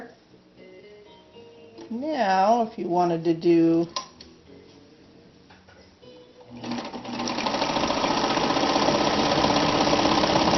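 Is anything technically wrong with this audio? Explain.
No, nothing technically wrong can be heard here.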